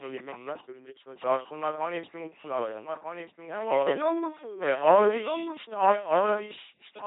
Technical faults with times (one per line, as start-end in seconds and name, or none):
0.00-7.06 doubled audio track
0.00-7.06 LPC-10 vocoder